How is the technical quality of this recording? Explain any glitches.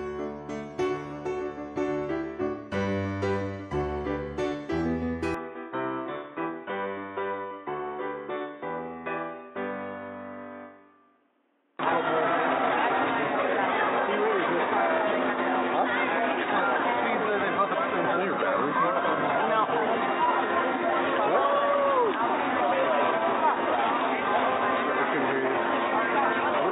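The recording starts clean but loses quality partway through. At 5.34 s the sound turns dull and boxy and stays that way to the end. Everything above about 3.8 kHz disappears. This is most likely an input switched to a poorer device, with the system moving to a narrower-band microphone or a headset's call profile. The change comes without a gap and without a jump in loudness. A faint new noise floor appears, roughly 45 dB below the signal.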